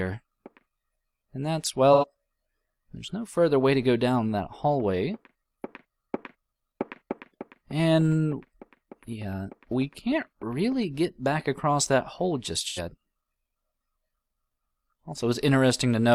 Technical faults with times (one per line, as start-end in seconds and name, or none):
1.93-2.05 AAC frame loss with concealment
12.62-12.79 AAC frame loss with concealment